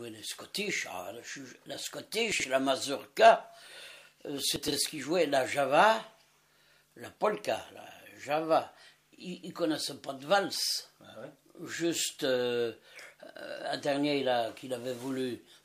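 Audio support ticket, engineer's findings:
Chunks out of order at 2.32–2.44 s: brief jumbled passage. One 40 ms chunk plays two chunk slots late, after the chunks that should follow it. Probable component: jitter buffer or chunk reassembly not enforcing sequence order.

Chunks out of order at 4.56–4.72 s: longer scrambled stretch. A 40 ms chunk lands three slots late. No audio lost. The misplaced segment creates three hard joins.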